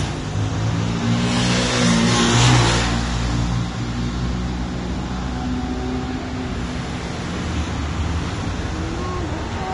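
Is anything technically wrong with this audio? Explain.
Yes. Throughout the clip there is plainly audible damage, likely from Vorbis compression at a low bitrate, around 32 kbps. Nothing remains above 10.6 kHz. The coarsely quantised treble turns fine detail into hiss and grain. Tones sound roughened and attacks are blurred.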